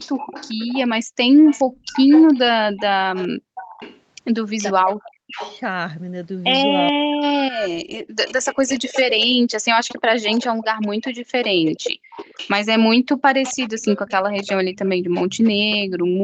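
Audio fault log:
0.0–5.6 s and 7.54 s to the end, echo leak: There's a faint delayed copy of the talker trailing about 0.43 s behind, sitting around 15 dB under the direct voice. It drops out between 5.6 and 7.54 s, then comes back and runs to the end. It's most likely a far end on loudspeaker whose echo canceller didn't fully scrub what its mic picked up, so the leftover got sent back down the line.
1.04 s, 3.38 s and 8.03 s, background gated by the echo canceller: At each of these the room tone briefly vanishes, dipping about 40 dB for roughly a sixth of a second before returning. That's the echo canceller clamping the microphone hard while its loudspeaker was playing, then releasing once it judged the echo risk had passed.
14.98 s to the end, background gated by the echo canceller: Here the room sound sinks again, but much more gently, about 9 dB, and it stays down to the end of the clip. 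It's the same gating mechanism, holding the mic partly down for longer rather than slamming it shut.
4.74–5.38 s, speech suppressed in double talk: The talker's voice sags and breaks up for about half a second, falling by roughly 40 dB at its deepest. Both ends were likely talking at once, and the canceller couldn't tell the local voice from the loudspeaker echo, so it pulled both down together.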